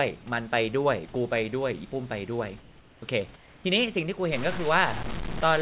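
At 2.6 to 3.02 s and again at 3.36 to 3.64 s, the room background in the pauses becomes a flat, featureless hiss. This is comfort noise in place of the background, about 2 and 3 dB quieter than the real room noise. Its likely cause is discontinuous transmission. The sender stops sending during silence, and the receiver synthesises a rough substitute.

From 4.32 s to the end, the audio turns grainy and rough. The grit rises and falls with the sound, and the error sits only about 10 dB below the signal. That points to low bit depth without dither, which fits roughly 5 bits with plain truncation. The audio carries nothing above 4 kHz throughout, as the call codec allows.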